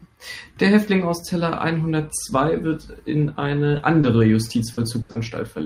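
Speech, with short concealed packet loss at 3.77, 4.01, 4.73 and 5.11 s: gaps of 20 to 40 ms patched by extending the last sound, heard as brief smears or wobbles. A burst of packet loss at 5.01 to 5.11 s drops about 80 ms, filled with a fading continuation before the speech jumps ahead.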